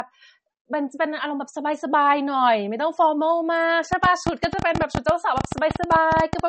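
From the first moment to the last, the speech is dull and band-limited. Nothing sounds above 8.4 kHz. The top is cut off cleanly, and a smeared, swirly coding texture sits on the sound. This is low-bitrate audio saved at a high bitrate. It was likely first squeezed through a low-rate MP3 encoder, around 32 kbit/s, and then saved again at something like 320 kbit/s. The larger second file cannot bring back the highs the first pass removed.

At 3.93 s a train of clicks begins. It runs to 6.40 s. That is about 11.8 sharp ticks per second, around thirty in all. The spacing is irregular, so the ticking stumbles rather than keeping a steady beat. The clicks stand roughly 15 dB above the speech and cut through it clearly. Each has much the same shape. That points to one repeating pulse, likely interference from nearby equipment or a faulty connection.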